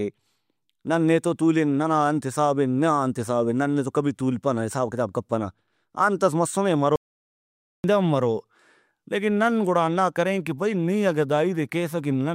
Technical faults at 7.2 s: audio dropout to silence

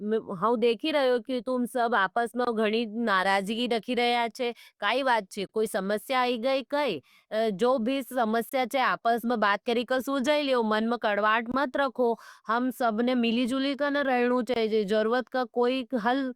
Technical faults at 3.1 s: none

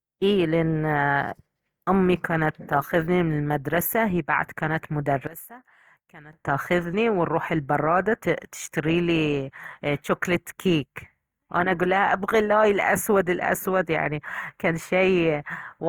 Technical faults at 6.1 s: Opus compression; one channel inverted

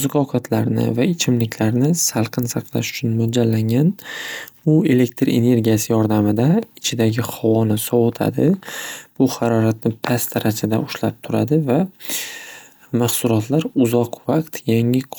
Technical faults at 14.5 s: none

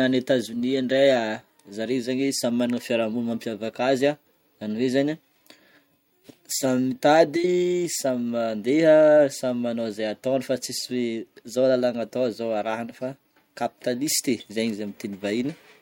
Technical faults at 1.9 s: none

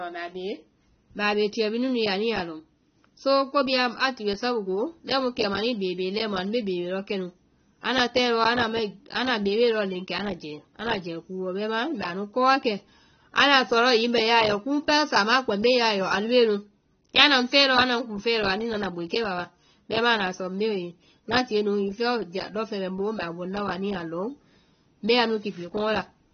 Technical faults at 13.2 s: AAC compression

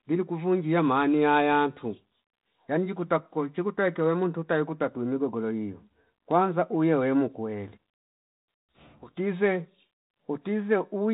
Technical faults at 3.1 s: none

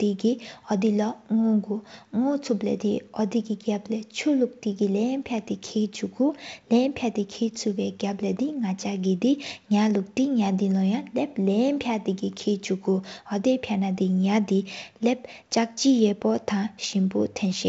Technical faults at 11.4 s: none

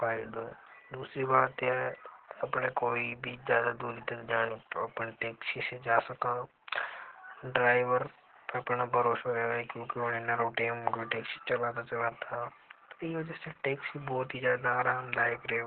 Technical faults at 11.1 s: Opus voice compression

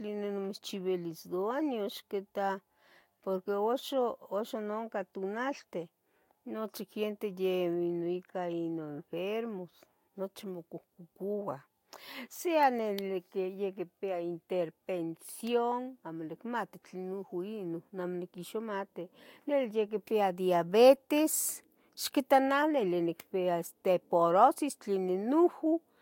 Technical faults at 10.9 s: none

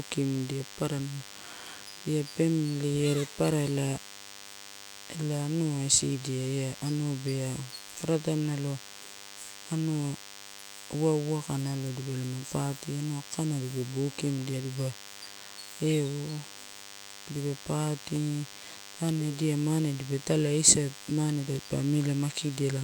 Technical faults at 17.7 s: DECT cordless phone buzz

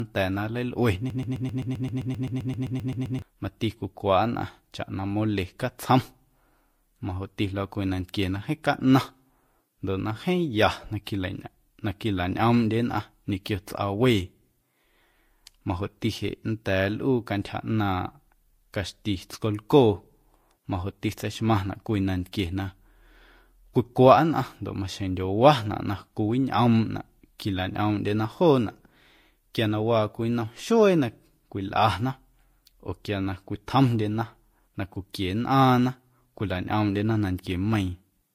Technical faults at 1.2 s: transcoding between lossy codecs; broken-record loop

